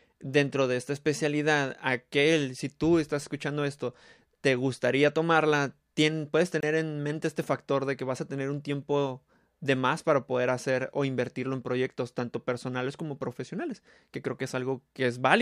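At 6.61 to 6.63 s, right after "te gustaría tomarla puedes" and just before "en mente este factor", a short hole of about 23 ms opens in the speech. It is a block of digital silence: the signal drops straight to silence and returns with no fade. The length fits a 1024-sample buffer that the program likely failed to fill in time, so zeros went out instead.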